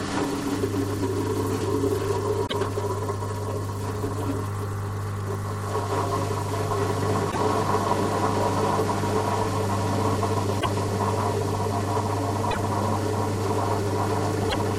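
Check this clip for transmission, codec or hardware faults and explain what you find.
There is one recurring fault, damaged data in a compressed stream, heard five times for about 0.1 s each: 2.44–2.54 s, 7.28–7.37 s, 10.57–10.66 s, 12.48–12.57 s and 14.46–14.56 s. Corrupted bytes make the decoder misread frames and lose sync until the next valid header, producing a brief chirp, squawk, click or short hole. A dropout, by contrast, is simply missing signal, with no decoder losing sync.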